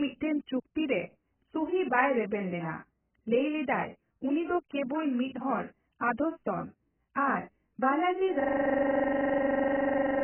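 AAC compression, throughout this speech recording: heavy codec damage leaves nothing above 3.1 kHz, likely from AAC-LC at a bitrate around 8 kbps discarding upper bands. System hang loop, from 8.40 s to the end: a 42.67 ms slice repeats exactly, a buzz at 23.4 Hz, which fits a frozen driver cycling a 2048-sample ring buffer.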